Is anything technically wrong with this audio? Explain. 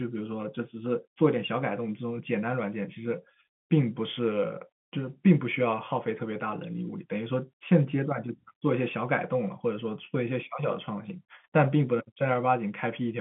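No, nothing is technically wrong with this audio.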